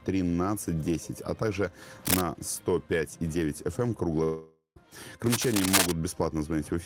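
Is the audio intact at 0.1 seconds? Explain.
Yes, at 0.1 seconds the audio is intact, with no dropout, click, distortion or other fault at that moment.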